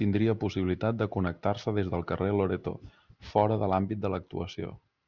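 Aliasing runs through the whole clip. The speech was taken down to a lower rate, consistent with 12 kHz, without filtering first, so energy above 6 kHz folded back below it. Sibilants turn gritty and metallic, with faint false tones. A spectrogram shows energy cut hard at 6 kHz, with mirrored traces beneath.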